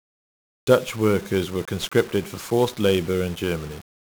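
The speech in this clip has passed through 1-bit DFPWM compression for its whole length, with each sample reduced to a single up-or-down step of an adaptive level, at a rate that fits a 48 kbps stream. The damage is heavy: strong broadband quantisation noise leaves the voice fuzzy and crackly, with its treble buried under hiss.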